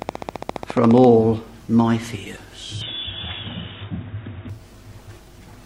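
From 0.02 to 1.05 s a train of clicks ticks over the sound at a steady 14.7 per second, about fifteen in all, each peaking roughly 10 dB above the material. It is likely interference from nearby equipment. On a waveform they stand out as evenly spaced spikes, and on a spectrogram as thin vertical lines.

From 2.81 to 4.50 s the input switched to a poorer device, likely a lower-grade microphone or headset profile. With no gap at the switch, the sound turns dull as everything above 3.8 kHz vanishes, the level shifts by around 5 dB, and a faint new noise floor appears. A spectrogram shows a hard ceiling at 3.8 kHz.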